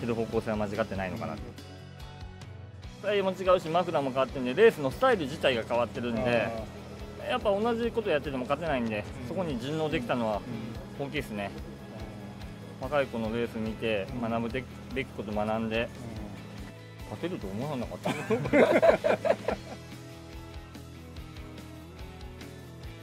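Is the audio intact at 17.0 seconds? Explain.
Yes, the audio is intact at 17.0 seconds, with no dropout, click, distortion or other fault at that point.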